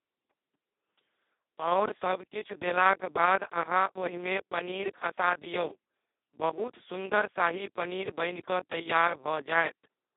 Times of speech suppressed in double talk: none

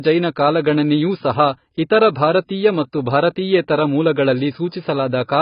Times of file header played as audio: none

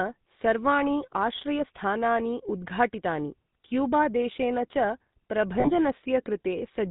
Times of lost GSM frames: 5.60-5.71

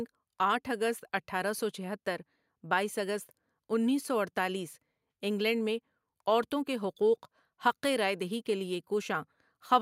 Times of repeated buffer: none

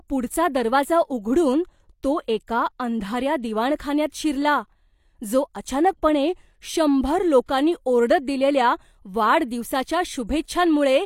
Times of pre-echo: 5.54, 7.46-7.48, 10.27

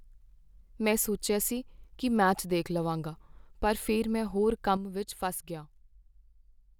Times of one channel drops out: 4.77-6.80

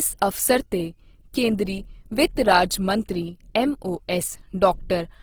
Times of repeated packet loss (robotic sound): none

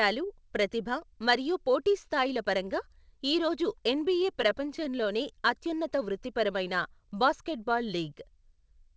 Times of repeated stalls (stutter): 4.13-5.06

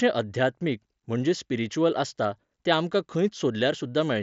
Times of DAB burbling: none

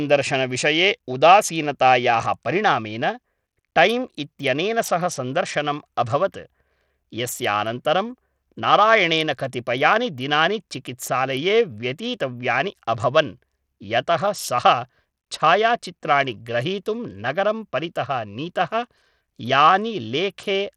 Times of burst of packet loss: none

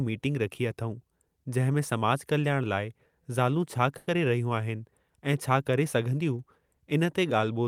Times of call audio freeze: 3.97-4.09

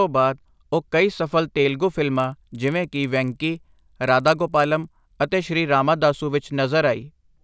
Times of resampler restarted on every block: 2.16-5.44

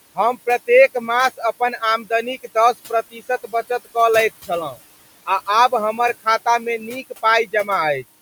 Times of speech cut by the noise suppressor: 3.11-3.54

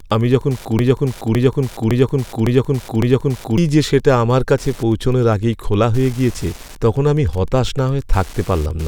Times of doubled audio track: none

